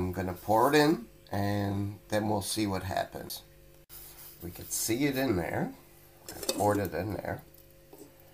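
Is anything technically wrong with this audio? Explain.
Yes. A CD skip at 3.29 s: the laser jumped to a different turn of the disc's spiral, so a tick and a very brief mute precede playback resuming elsewhere.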